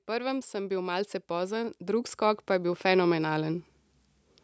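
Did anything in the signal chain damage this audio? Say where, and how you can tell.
Yes. The damage comes from the call processing stage, in the form of automatic gain rising. From 0.05 s to 3.7 s the level climbs steadily, by about 15 dB in total. Speech and background noise swell together, so this is not a louder talker. The gain control judged the input too quiet and kept turning it up over several seconds. The call path's band limit, with nothing above 8 kHz, is expected.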